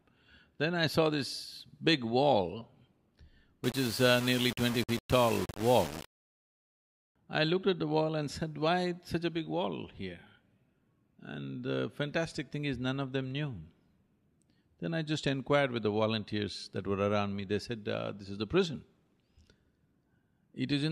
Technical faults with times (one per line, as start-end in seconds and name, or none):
3.64-7.16 low bit depth without dither